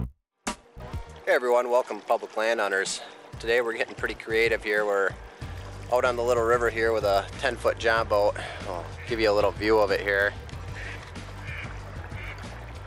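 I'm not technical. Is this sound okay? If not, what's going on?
No. The resampler restarted on every block: the sound was converted to a higher sample rate in separate 20 ms chunks, which fits a change from 24 kHz to 48 kHz, and each chunk edge was guessed wrongly. That leaves a buzz of about 50 ticks per second, heard only while sound is playing.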